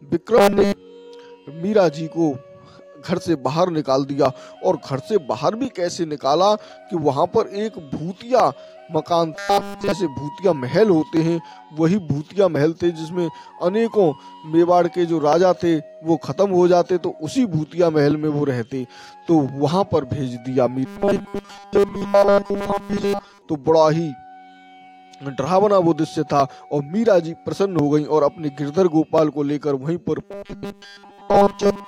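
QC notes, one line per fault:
0.38–0.73 s, 9.34–9.93 s, 20.86–23.41 s, 30.20–31.87 s: robotic sound from repeated short buffers. The sound flattens into a stiff, metallic buzz at 200 Hz, which matches a 5 ms slice looping over and over while the real audio gets skipped. The middle two stretches are fully taken over, while the first and last have real audio poking through. The likely cause is audio arriving too late, so the playback keeps refilling from that last fragment.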